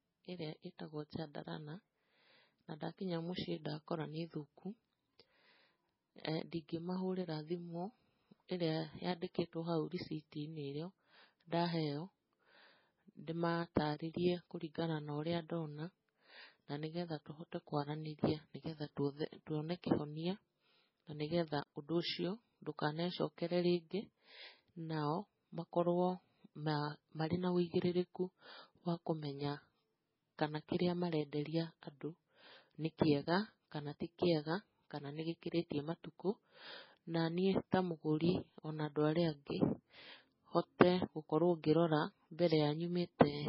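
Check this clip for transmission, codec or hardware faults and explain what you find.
One fault runs through the whole clip: heavy MP3 compression damage. Throughout the speech, everything above 5.6 kHz is simply missing, so on a spectrogram the energy stops at a flat, hard ceiling with empty space above it. Below that line the speech looks patchy, with weak components flickering in and out between frames. That is the likely cause of the watery, swirling texture and the dull, smeared consonants and onsets. The damage points to a very low bitrate of around 16 kbps.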